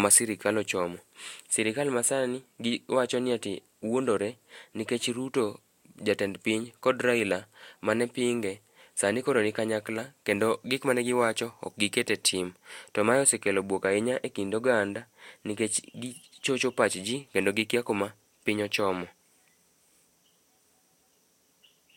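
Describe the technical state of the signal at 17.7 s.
At 17.7 s the speech signal is intact, with no audible technical fault at that moment.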